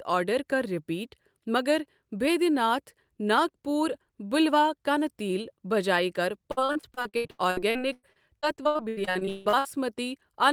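Speech with repeated packet loss (robotic sound) from 6.51 to 9.77 s. Dozens of short holes follow one another. Each is patched by stretching the preceding sound, giving a choppy texture with pieces missing. Gaps reach 159 ms, and roughly a third of the stretch is concealed.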